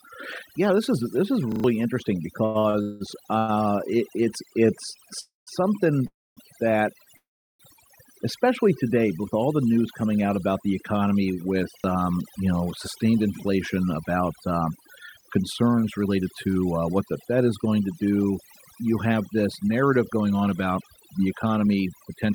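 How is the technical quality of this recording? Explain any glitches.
The speech has processing damage throughout and a cluster of network-playback glitches, mostly in the first eight seconds and again toward the end.

Overdone noise removal runs the whole way through. The background drops and breaks up into twinkling, warbling specks. An over-aggressive noise reducer is shutting down individual frequency bands close to its noise estimate and taking the quieter parts of the voice with them.

A repeated buffer appears at 1.52 to 1.64 s as a quick four-hit stutter with hard joins, and again at 11.8 s as a single doubled fragment. The same short slice, which fits a 40 ms buffer, is replayed because fresh audio didn't arrive in time. Around a tenth of a second of real audio is lost in the first case.

Repeated stalls (stutter) occur from 2.45 to 3.02 s, where the speech drags and catches four times. 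About 65% of that stretch is stretched-out filler, with the longest hold 184 ms. Late packets kept emptying the jitter buffer, and the receiver extended the last sound each time. Nothing is missing.

A short stall from a late packet comes at 3.38 to 3.50 s, where a sound is held about 99 ms too long. The receiver stretched it while waiting for one overdue packet, then resumed at the same point, with nothing lost.

Three call audio freezes follow: 5.21 to 5.49 s (261 ms), 6.07 to 6.39 s (299 ms) and 7.17 to 7.61 s (427 ms). Each is a brief fading buzz or hiss followed by silence, about 170, 240 and 360 ms of it respectively. Then the speech picks up exactly where it stopped. The likely cause is packets held up in transit, which drained the jitter buffer.

Jitter buffer speed-up shows from 14.61 to 16.63 s at 108% speed and from 19.61 to 22.32 s at 110%. The speech sounds hurried but keeps its pitch. 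The receiver trimmed roughly a fifth and then three tenths of a second in small pitch-period slices to cut built-up delay.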